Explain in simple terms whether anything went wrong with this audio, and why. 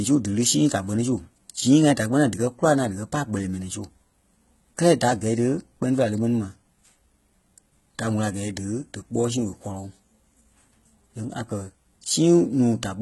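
Throughout the clip, the speech has a gritty, metallic top end, with s sounds coming out lispy, and nothing at all above about 11.8 kHz. This is likely HE-AAC compression, heavily squeezed: the treble isn't the original but a rebuilt copy of lower sound.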